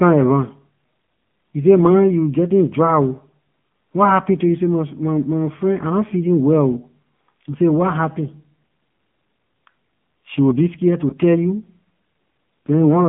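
Throughout, the speech has been squeezed through the AMR narrowband mobile codec at a low bit rate, and the band sits between 150 Hz and 3.4 kHz. The codec rebuilds the voice from a vocal-tract model excited by a handful of pulses per subframe, and at a rate that fits the 7.4 kbps mode that model is plainly audible. Consonants lose their air, vowels take on a buzzy, synthetic edge, and nothing above the band survives.

From 11.10 to 11.14 s, right after "will be scare to", there are lost AMR speech frames. A frame failed its check in transmission, and the decoder papered over the gap by repeating its last pitch and filter settings at reduced gain. The result is a brief dip or warble, which fits a single 20 ms frame going missing, before the voice resumes, momentarily thin or rough.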